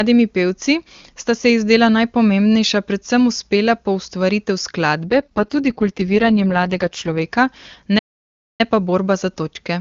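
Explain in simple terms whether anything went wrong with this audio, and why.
Two things go wrong. From 5.05 to 7.22 s there is an AMR rate drop: the phone network switched the speech codec to a much lower quality setting, so the speech turns rough and buzzy, but it never cuts out and doesn't sound muffled, unlike a dropout or narrowband fallback.

From 7.98 to 8.61 s there is a playback stall: the sound simply stops for about 0.6 s, most likely because the player ran out of data. The silence is clean and long, not a brief click or stutter like a lost packet.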